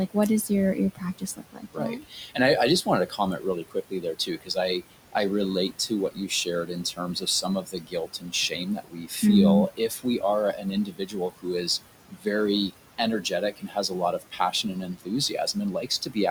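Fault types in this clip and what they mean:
noise suppressor artifacts: Throughout the clip, a frame-by-frame noise reducer estimates the steady background and pulls down each band it judges to be noise, by about 18 dB here. The room noise, which sits about 14 dB below the speech, drops away in the pauses and comes back under the speech whenever the talker is active. The background pumps in step with the speaking rhythm instead of staying constant.
speech cut by the noise suppressor: The suppressor misreads low-level speech as background and attenuates it by about 14 to 19 dB, so soft consonants, word tails and quiet syllables sound swallowed. It happens in stretches from 0.48 to 2.37, 2.83 to 4.57, 5.89 to 9.23, 9.77 to 10.23, 10.56 to 11.46, 12.09 to 12.26 and 12.7 to 16.17 s. Within each stretch only brief fragments are hit, together roughly a few seconds.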